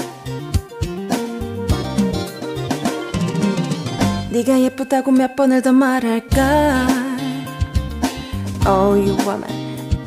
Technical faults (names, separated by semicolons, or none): none